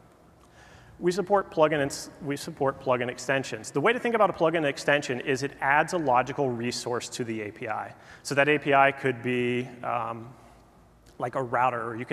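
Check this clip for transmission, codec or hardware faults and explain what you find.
No transmission, codec or hardware fault can be heard anywhere in the clip. The sound runs without any break or disturbance that would point to a problem along the path.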